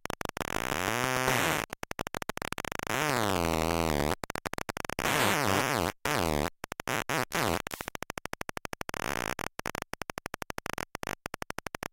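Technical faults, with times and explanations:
0.99 to 1.72 s, GSM signalling bursts: a galloping dit-dit-dit of short buzzes sits around 25 dB below the sound. A 2G phone sent brief groups of radio bursts, and the audio circuit rectified them. Each group buzzes at the 217 Hz burst rate.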